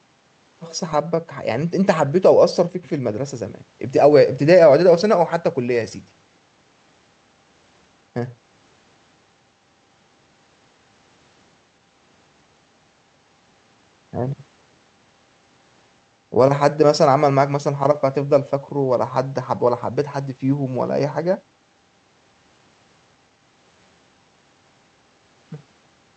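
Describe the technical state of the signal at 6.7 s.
At 6.7 s the speech comes through intact, with no dropout, glitch or distortion, just the band-limited sound of the Opus call path carrying it as normal.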